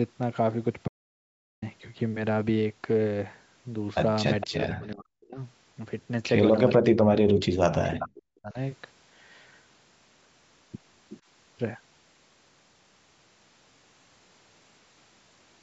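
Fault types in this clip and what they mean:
Audio dropout to silence: the sound cuts to dead silence from 0.88 to 1.62 s, about 0.74 s lost, likely from the input briefly dropping out.
Echo leak: short, faint repeats of the speech trail it by about 460 ms at 4.41 and 6.69 s, and by about 370 ms at 7.99 and 11.09 s, likely loudspeaker pickup the canceller missed.
Speech suppressed in double talk: the speech ducks by as much as about 40 dB at 4.44–5.39, 6.76–7.55 and 7.71–8.58 s, likely the canceller clamping down while both sides overlap.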